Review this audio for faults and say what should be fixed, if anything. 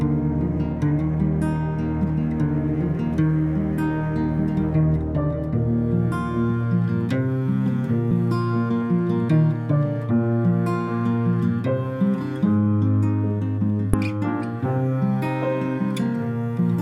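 Two brief blips at 8.11 s and 13.94 s, each only a few milliseconds long, come from damaged data in a compressed stream. At those points bytes in the encoded stream were lost or overwritten, so the decoder misread the affected frames, lost sync and searched for the next valid frame header, producing a short burst of garbled output. Prevent it by carrying the stream over a checksummed, error-corrected transport and verifying file integrity before decoding.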